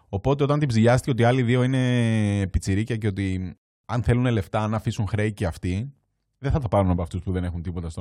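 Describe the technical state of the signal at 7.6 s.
Sudden gain jump from 6.97 s to the end: speech and noise drop together by about 6 dB, likely a gain change without a ramp.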